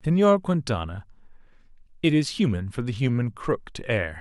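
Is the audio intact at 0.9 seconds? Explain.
Yes, the audio is intact at 0.9 seconds, with no fault audible at that moment.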